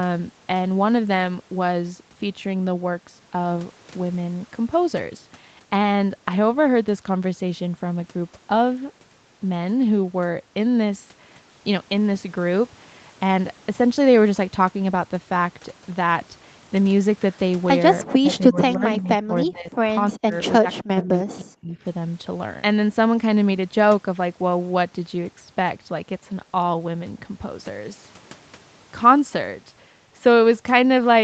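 Speech that dips and breaks up in pieces from 18.22 to 19.09 s, 19.26 to 19.78 s, 20.11 to 20.36 s and 20.59 to 21.77 s, sinking by about 15 dB at first and then as much as about 40 dB. This is likely speech suppressed in double talk, with the echo canceller ducking this talker while the far side spoke.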